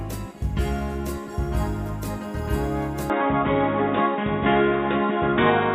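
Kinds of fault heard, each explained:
Input switched to a poorer device: at 3.10 s the sound abruptly turns dull and boxy, with nothing above 3.8 kHz, a level shift of about 5 dB and a new noise floor underneath, with no gap at the switch; likely the recording input changed mid-take to a narrower-band microphone or headset profile.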